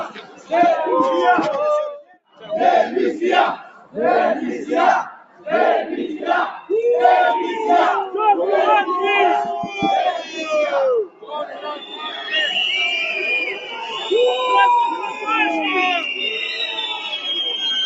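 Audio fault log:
Throughout: noise suppressor applied to music or sounds. A speech-tuned suppressor keeps treating steady and decaying parts of the sound as noise, so the level swings by roughly 10 dB. Onsets survive while sustains sink, giving a pumping, thinned texture rather than a fixed dullness.
0.09–6.7 s: sound cut by the noise suppressor. Within this span, about two seconds in total are pulled down, by up to about 16 dB at the deepest. Held and fading passages dip or lose their tails while sharp events stay intact, unlike a dropout, which would silence everything alike.
9.68–15.27 s: sound cut by the noise suppressor. Again about two seconds in total are attenuated, at worst by about 16 dB, with sustained material and decays sagging while transients pass through. The gain moves with the sound's steadiness, which separates it from a network gap or clipped signal.
16.93–17.19 s: sound cut by the noise suppressor. 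A shorter, milder dip of about 5 dB over roughly 200 ms, catching a steady or fading moment near the end. Its gentle depth and preserved attacks mark suppressor gain-riding, not a codec glitch. The band stops near 8 kHz, consistent with Opus at 48 kbps.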